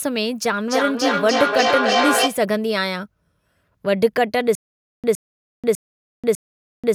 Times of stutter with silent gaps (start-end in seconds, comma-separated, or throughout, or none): 4.55-6.95